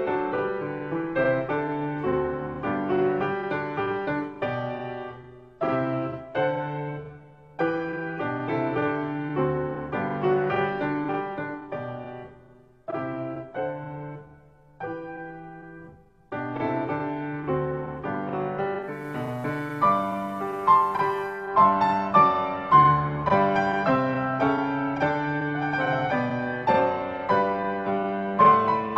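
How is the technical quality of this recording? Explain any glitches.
There is one glitch. From 18.77 to 21.56 s, digital radio blending to analogue: the receiver lost the digital stream and cross-faded over 0.34 s to FM. Faint hiss enters, well below the signal, and the level drops about 1 dB. Unlike a dropout, the sound continues uninterrupted.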